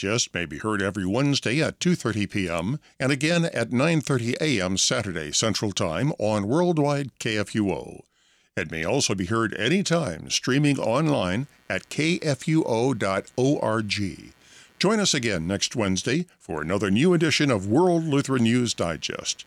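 From 10.75 s to the end of the recording, just after "be heard anytime streaming", computer activity noise appears beneath the speech: a buzzing, chirping texture pulsing at around 150 Hz, roughly 35 dB below the voice. Changing processor, graphics or mouse load is shifting the ground reference the audio circuit shares with the computer, so the interference follows the machine's activity rather than the talker, rising and falling on its own schedule.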